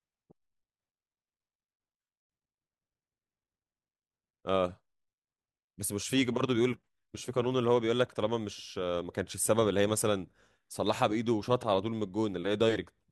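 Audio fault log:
No faults are heard anywhere in this speech clip. There is nothing to log at any point.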